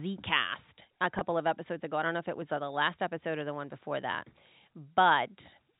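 It's a speech clip with one packet loss with pitch repetition at 1.19 to 1.21 s, just before "of episodes ago I". About 20 ms of audio goes missing, which fits two 10 ms packets, and the receiver covers it by repeating the last pitch period. Because the gap is so short, you hear a slightly held, buzzy moment rather than silence. It all rides on a G.711 telephone-band signal capped at 4 kHz.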